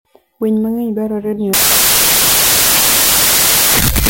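At 1.53 s the speech turns into loud, harsh broadband noise that runs to the end. That's samples built from the wrong bytes: the reader assembles each sample misaligned or byte-swapped, so the jittery low bits become the big part of every value.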